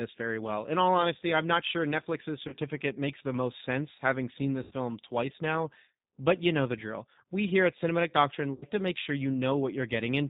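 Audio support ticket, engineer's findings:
G.729 codec throughout at 8 kbit/s, damage plainly audible. Band stops at 4 kHz, sound slightly rough and synthetic, with warbling on any noise. The cause is the frame model: a filter, a pitch predictor and sparse pulses per 5 ms half-frame. A plain 4 kHz low-pass would be band-limited but smooth. The roughness here points to the codec, not the filter.

VoIP packet loss concealed by the speech codec at three points: 2.48–2.55 s, about 40 ms lost, which fits two 20 ms packets; 4.63–4.74 s and 8.54–8.66 s, about 80 ms each, which fits four packets. The decoder repeats its last pitch and filter at falling gain, so the sound stretches into a fading buzz or coloured noise. Recovery is weak after each gap. A dropout would give silence or clicks, not a buzz.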